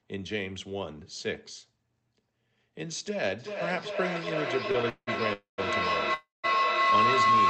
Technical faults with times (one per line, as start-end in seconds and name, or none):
3.39-7.49 feedback howl
4.71-4.76 short stall from a late packet
4.89-5.60 call audio freeze
6.14-6.46 call audio freeze